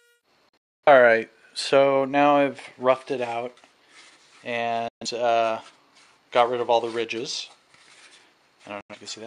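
At 0.49 s the sound snaps to silence in a 3 ms fade, comes back briefly, then drops out again until 0.88 s, with about 0.3 s missing over a 0.34 s span and the longest hole 0.26 s. Shorter holes follow at 4.88 to 5.06 s (0.13 s) and 8.81 to 8.95 s (0.09 s). This is digital broadcast dropout: the receiver muted whenever frames failed, and the gap lengths fit frames of about 43 ms each.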